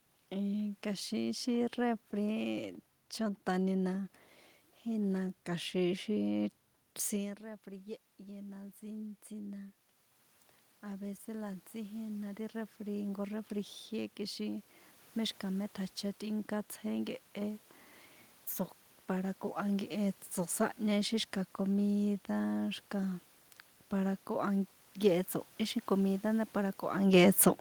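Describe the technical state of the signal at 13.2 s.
At 13.2 s the voice and the room noise swell together. This is automatic gain rising from 10.81 to 14.7 s, lifting gain by about 6 dB after the input dropped about 14 dB.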